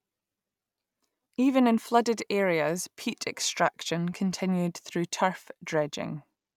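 No technical faults can be heard anywhere in this speech recording. Nothing interrupts, distorts or alters the audio at any point.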